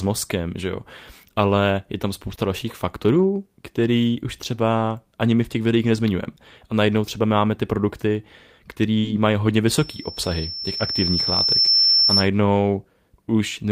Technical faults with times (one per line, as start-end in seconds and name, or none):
2.27-2.33 lost packet rebuilt from error correction
2.35-2.39 short concealed packet loss
3.15-3.25 lost packet rebuilt from error correction
5.43-5.45 lost packet rebuilt from error correction
8.99-9.05 burst of packet loss
9.03-9.09 lost packet rebuilt from error correction
9.67-12.28 loudspeaker feedback squeal